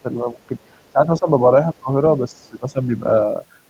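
Speech suppressed in double talk hits this speech recording at 0.48–0.52, 0.93–1.28, 1.74–1.89 and 2.19–3.04 s, with dips reaching about 15 dB, likely because an echo canceller attenuated the talker while the far end spoke. The other side's voice leaking through appears faintly, far below the talker, at 0.62–0.90, 1.77–1.81 and 2.34–2.48 s, likely loudspeaker echo left in the microphone signal.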